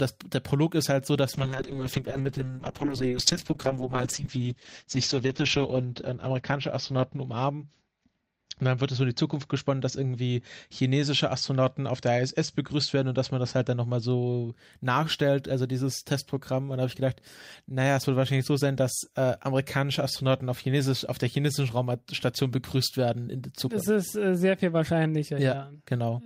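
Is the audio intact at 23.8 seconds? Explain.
Yes, the audio is intact at 23.8 seconds, with no dropout, click, distortion or other fault audible at that moment.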